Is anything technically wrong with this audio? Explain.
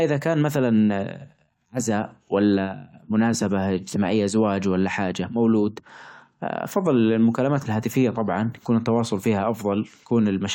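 No, the speech recording shows no technical faults anywhere in the signal.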